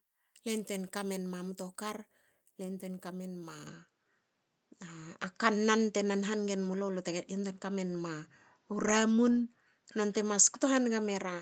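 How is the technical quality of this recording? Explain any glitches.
The recording has one clear fault: the input appears to switch to a poorer device partway through the speech. At 3.67 s, right after "le yantuein kamenma", the sound narrows and turns duller for the rest of the clip, with nothing above 7.6 kHz. The level shifts by around 5 dB, and a new noise floor appears roughly 50 dB below the speech. The change is instantaneous, with no gap. The likely cause is the system changing to another microphone or a headset profile, whose narrower band, different gain and own self-noise replace the original input's character.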